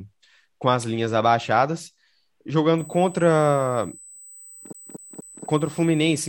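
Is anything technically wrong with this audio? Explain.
Yes, two faults. From 2.78 s to the end there is USB whine: current drawn by the USB bus in 125-microsecond microframes leaks into the audio through power or ground. It lays a steady, fixed 8 kHz whine about 25 dB below the speech.

From 4.73 to 5.45 s the audio is a CD stuck on one turn: a scratch throws the laser back one track at the same point each rotation. A 240 ms slice plays three times with a brief mute at each jump, giving the even stutter of a skipping disc.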